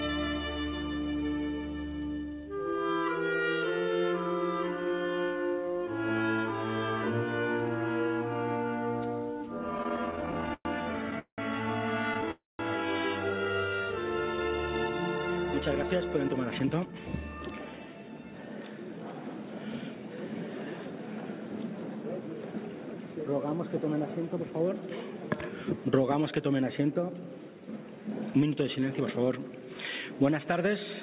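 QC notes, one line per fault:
9.78–12.29 s, repeated stalls (stutter): about 21 short hangs, the longest 189 ms, where the last sound is stretched out before playback resumes. About half a second is added, with nothing lost. The stops recur rather than forming one long gap, so the audio drags unevenly.
12.31–12.61 s, call audio freeze: a single 280 ms hold. The last sound is continued briefly, then dies into about 190 ms of silence before the audio picks up where it left off. This is likely late packets emptying the jitter buffer. It is one stop rather than a run of stutters.
15.16–17.88 s and 28.33–29.20 s, jitter buffer speed-up: the audio plays about 11% and then 7% fast at unchanged pitch, trimming roughly 0.3 s and 70 ms. Tiny pitch-period slices are cut to shed built-up delay. It sounds hurried rather than clipped or skipped, and this runs over the call path's band, which stops at 4 kHz.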